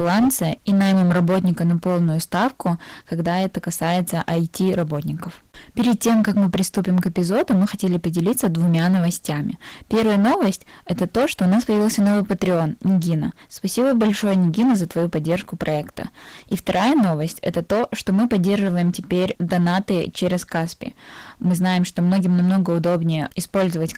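From the very start and all the way through, the speech runs into hard clipping. It's driven about 14 dB past what the stage could pass, so the peaks get sliced flat, something like one sample in seven. Those squared-off tops throw harmonics high up the spectrum, and with that much overload every loud syllable turns into harsh fuzz rather than the occasional crackle.

Layered on top of that, across the whole clip, is Opus voice compression, and the codec damage is plainly audible. It sounds like a low rate, around 16 kbps, in the hybrid mode where the linear-prediction coder handles the lower band and a transform layer covers the top. The band isn't narrowed, with content reaching about 20 kHz, but the excitation is coded coarsely, which leaves the speech hoarse and a bit robotic. The texture fits 20 ms frames.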